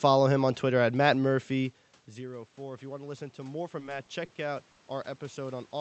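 Speech carried over an Opus call link at 64 kbps, band-limited to about 8 kHz, shows three technical faults. Automatic gain rising begins at 1.53 s, after the talker moves back and the input falls by about 17 dB. Voice and room noise swell together to the end, unlike a talker simply returning closer. Repeated stalls (stutter) run from 3.79 to 4.32 s: four jitter-buffer underruns fill 80 ms, the longest 40 ms, dragging the sound without dropping any. A single short stall from a late packet at 4.71 to 4.80 s holds one sound for 60 ms, an isolated stretch rather than a stuttering run.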